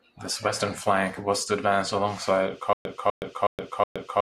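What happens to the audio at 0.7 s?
Nothing goes wrong at 0.7 s; the speech carries on intact through that moment.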